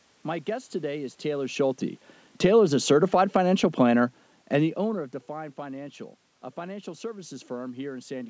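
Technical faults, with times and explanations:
1.24–5.12 s, automatic gain falling: right after "guest today is", the level eases down by about 6 dB over nearly four seconds. The automatic gain control judged the input too loud, or its background noise too strong, and lowered its gain gradually. A talker moving away from the microphone would quieten only the voice, but here the room noise sinks at the same rate as the speech, because the whole input is being turned down.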